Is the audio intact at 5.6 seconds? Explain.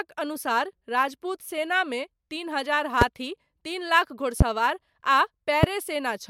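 No. A loud pop lands from 5.63 to 5.66 s, a single sharp thump about 20 dB above the speech, which continues underneath. A sudden voltage step or pulse, likely from a plug, switch, static discharge or driver glitch, entered the signal, and the downstream circuitry shaped it. On the waveform it appears as a tall, narrow spike towering over the speech; on a spectrogram, as a thin vertical stripe spanning the frequency range.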